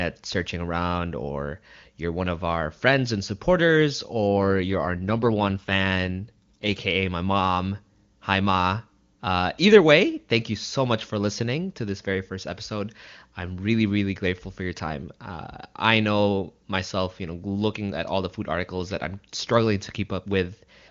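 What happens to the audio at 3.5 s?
Nothing goes wrong at 3.5 s: the speech there comes through intact, with no fault at that moment.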